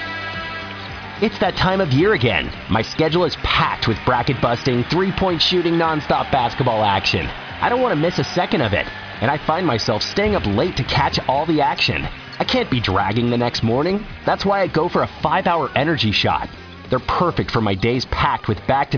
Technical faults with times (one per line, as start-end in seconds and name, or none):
none